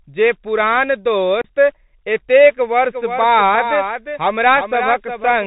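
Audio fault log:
throughout: Bluetooth CVSD headset codec. The speech travels over a narrowband headset link that codes each sample as a single up-or-down bit at 64 kHz with an adapting step, so nothing above 4 kHz survives. Loud, bright sounds rise faster than the step can follow and distort, sibilants turn scratchy, and a fine granular hiss sits under the speech, all plainly audible here. The result is the thin, muffled, gritty quality of a Bluetooth call.
1.41 to 1.44 s: unconcealed Bluetooth headset packet loss. Right after "जे पुरान" the speech drops out for about 30 ms. That gap fits several consecutive voice packets of a few milliseconds each going missing between headset and phone, with silence or an idle pattern put in their place rather than anything reconstructed. The hole starts and ends abruptly, which can click, and on this CVSD link the speech returns quieter for a moment.
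2.85 s to the end: doubled audio track. From here the speech is heard twice, with a second full-band copy trailing by about 400 ms at roughly 10 dB below the original. The copy carries no decay or room colour, so it is not an echo from a space. It switches on abruptly at 2.85 s and runs to the end, which points to the signal being likely picked up a second time through a slower path or left duplicated in an edit.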